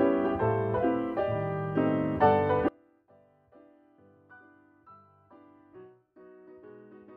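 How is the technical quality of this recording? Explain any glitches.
There's one real problem: an audio dropout to a faint residue at 2.69 s that lasts to the end. The signal abruptly sinks to a faint leak around 30 dB down, likely a lost feed with the path still live.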